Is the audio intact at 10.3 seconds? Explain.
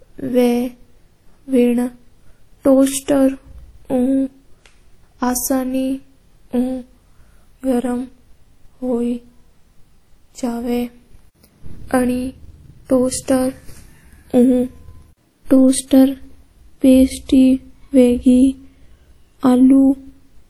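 No. WMA compression affects 10.3 s, as it does the whole speech clip. The speech has a ringing, washy quality, with a hiss that rises and falls along with the signal. The likely cause is a transform codec such as WMA at a low rate, around 48 kbps. Long transform blocks smear quantisation noise across tens of milliseconds, and weaker spectral detail is discarded, even though content still extends to about 20.1 kHz.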